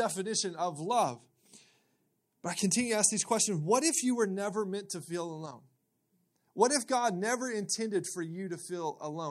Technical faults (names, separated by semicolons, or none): none